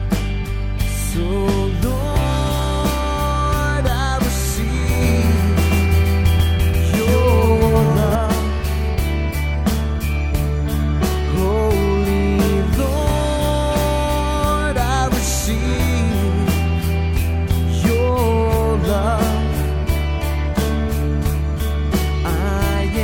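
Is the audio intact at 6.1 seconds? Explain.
No, a doubled audio track runs from 5.01 to 8.15 s, likely a second, slower capture path adding an equally loud copy about 150 ms late, starting and stopping abruptly.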